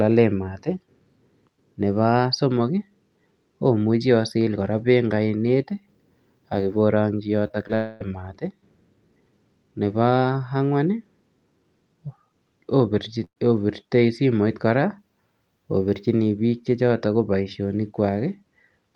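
At 7.47 to 7.52 s, 7.52 to 7.56 s and 7.68 to 7.71 s come three instances of short concealed packet loss. Each time about 20 ms of audio failed to arrive and the decoder extended the preceding sound, giving quick smears or a wobble. On a spectrogram the continued sound stretches flat, then rejoins the real signal at seams.

From 7.75 to 8.02 s, roughly a quarter of a second of sound is replaced by a continued buzz or hiss that decays without reaching silence. That is most likely a long network dropout. The waveform shows a smooth, shrinking envelope, and the spectrogram shows smeared, featureless bands instead of normal detail.

At 13.24 to 13.38 s a burst of packet loss removes about 120 ms. The last sound is held briefly and turned down, and the final 70 ms or so are silent before the audio resumes further on. This shows as a tapering block followed by a blank vertical gap.

Across the clip the high end stops near 12 kHz, consistent with the call codec's bandwidth.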